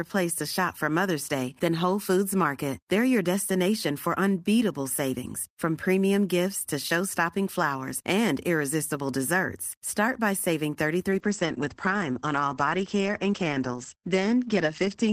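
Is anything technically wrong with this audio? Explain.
Yes. From 11.11 s, just after "by saving", to the end, there is a call bitrate drop from 32 to 12 kbps. The starved encoder codes coarsely and narrows bandwidth from 20 kHz to 8 kHz. The speech turns muffled and gritty, unlike a clean low-pass filter.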